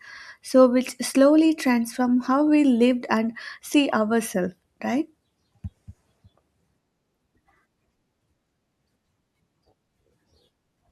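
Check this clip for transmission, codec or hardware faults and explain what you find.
Two faults are audible in the speech, both within a second of each other.

At 3.17 s there is a bit error spike. A single sample jumps far from its true value and snaps straight back. That points to one flipped bit in memory or on a digital link, which throws the value off by a power of two. It is heard as one sharp, broadband tick. The tick bears no relation to the surrounding speech.

At 3.91 s there is a corrupt frame decoded. Damaged bits in a compressed frame were passed to the decoder and played anyway. Misread codes or gains put energy at the wrong frequencies for the span of the damage, which sounds like about a couple of frames. The result is a brief chirp or blip. It peaks at roughly -35 dBFS.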